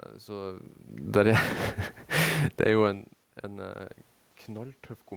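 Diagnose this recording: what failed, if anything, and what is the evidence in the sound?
The call-processing stage's automatic gain control, falling, cut its gain by about 9 dB between 1.01 and 1.37 s after judging the input too loud or its background noise too strong. The speech and the room noise behind it sink together, which shows that gain, not distance, changed.

Automatic gain rising overlaps the end of the fall in the same stage. When the input dropped by about 24 dB, the control raised its gain by about 10 dB from 1.28 to 1.85 s, so voice and background swell together over roughly half a second. The level shifts near 0.5 and 2.0 s come instead from the talker moving.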